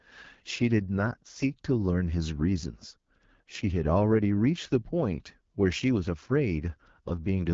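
Throughout, the speech carries AMR wideband (HD Voice) codec damage: a rough, raspy texture from the pulse-driven vocal tract model, which fits the low 8.85 kbit/s mode. Unlike a plain low-pass, the top band is hissy synthetic noise ending near 7.5 kHz.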